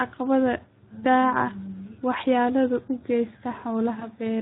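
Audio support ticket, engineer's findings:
Speex codec, whole clip: speech hoarse and noisy, excitation thin, upper band a shaped hiss rather than real detail. Character fits roughly an 11 kbps mode. CELP grain, not MP3-style swirl or a plain low-pass.

VoIP packet loss concealed by the speech codec, 3.99–4.07 s: brief stretched sound fading out, weak or distorted speech after. Points to one 20 ms frame lost and extrapolated. Decoder fill and slow recovery, not a silent dropout or click.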